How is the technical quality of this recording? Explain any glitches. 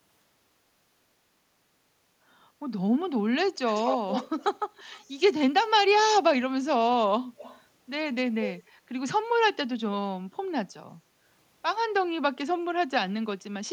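A delayed copy of the speech trails the talker by about 187 ms at 3.68–4.44 s (nearly as loud), 4.75–5.1 s (faint), 7.37–7.61 s and 8.44–8.63 s: echo leak, likely from a loudspeaker echo canceller letting its own playback through.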